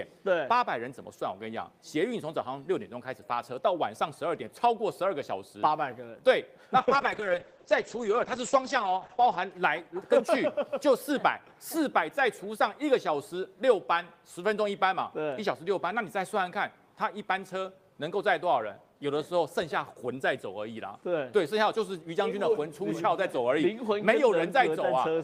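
Between 6.78 and 9.57 s there's a call bitrate drop. The audio turns rough and watery, and the top end vanishes, with the bandwidth falling from 20 kHz to 8 kHz, so everything goes muffled. It stays at its worst for about 2.65 s before clearing up. That's the encoder being told to spend far fewer bits after the bandwidth estimate fell. The sound fits a drop from roughly 32 kbps to about 9 kbps.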